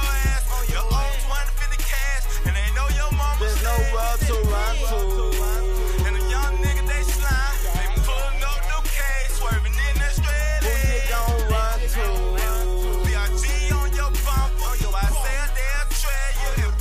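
No technical faults can be heard anywhere in the audio.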